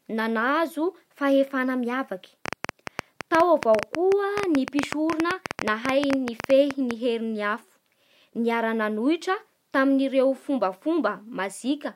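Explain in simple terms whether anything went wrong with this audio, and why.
Something went wrong from 2.46 to 6.92 seconds. There is a train of clicks: around forty similar sharp ticks, nearly ten per second, at an uneven pace. They sit over the speech. Electrical interference or a faulty connection or power supply is the likely cause.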